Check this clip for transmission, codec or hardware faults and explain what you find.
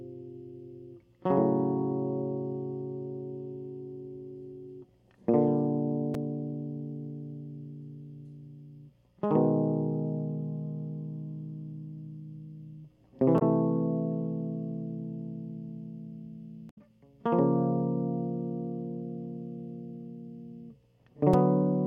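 The music has two brief faults, both from damaged data in a compressed stream, at 13.38 to 13.42 s and 16.69 to 16.78 s. Corrupted bytes make the decoder misread frames and lose sync until it finds the next frame header. Each spot comes out as a chirp, squawk, click or short hole.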